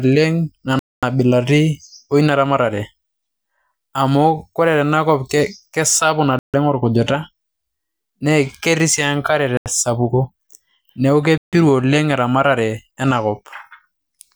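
A speech clip with four dead gaps where the audio stops and resumes where it left off, at 0.79 s (about 235 ms), 6.39 s (148 ms), 9.57 s (86 ms) and 11.38 s (152 ms), likely Bluetooth stalls; waveform and spectrogram show clean blank columns.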